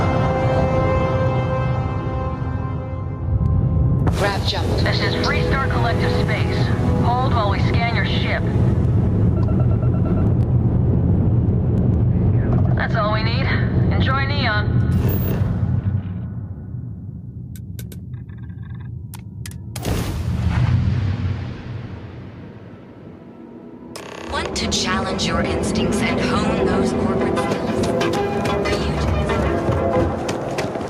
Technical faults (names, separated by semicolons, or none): gain pumping